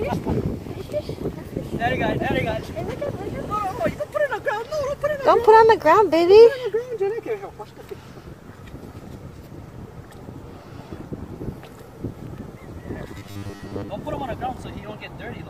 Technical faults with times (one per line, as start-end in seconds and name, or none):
13.19-13.89 robotic sound from repeated short buffers